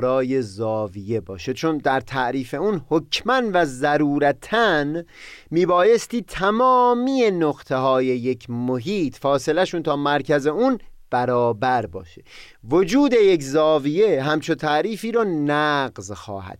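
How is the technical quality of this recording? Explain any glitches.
Nothing stood out on listening to this speech recording; there were no glitches to explain.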